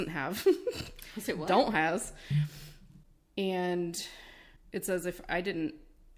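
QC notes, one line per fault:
No technical faults were found in the signal.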